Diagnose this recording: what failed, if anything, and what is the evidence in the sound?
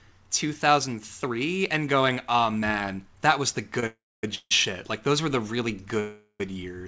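The network stage shows a short stall from a late packet at 3.80 to 3.83 s in this speech. The sound there is held about 25 ms too long, with a slight buzz or dip, and nothing is lost. The jitter buffer ran dry briefly and stretched the last sound until the packet came, then resumed from the same point. Unlike the freezes that follow, it is too brief to fade into hiss or silence.

Three call audio freezes follow in the network and buffer stage, at 3.86 to 4.24 s, 4.35 to 4.52 s and 6.00 to 6.41 s. They add about 366, 157 and 400 ms of filler, ending in roughly 240, 40 and 50 ms of silence. The last sound decays into buzz or hiss, then quiet, and the speech resumes where it stopped, with nothing skipped. That continuation with no lost material separates these from dropouts. The likely cause is packets held up in transit. The G.722 call path itself is working normally, with nothing above 8 kHz.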